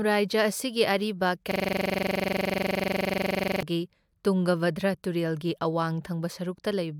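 In this speech clip, a system hang loop occurs from 1.51 s to 3.63 s. The system froze while the hardware kept replaying one 42.67 ms slice of buffered audio, which fits a 2048-sample buffer. Some fifty exact repeats produce a rattling stutter at 23.4 Hz in place of speech.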